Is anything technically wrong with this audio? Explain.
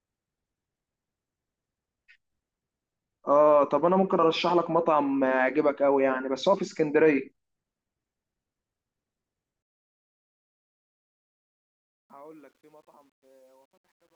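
Yes. Truncation distortion on a fade runs from 9.62 s to the clip's end at 14.15 s. The fade-out is quantised without dither, which fits a 10-bit stage. The fading speech collapses into coarse square steps, and from 11.53 s it sounds gritty.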